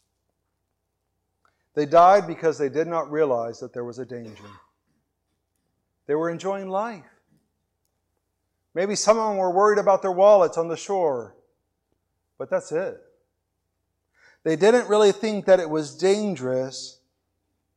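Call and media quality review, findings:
No faults found in this speech recording.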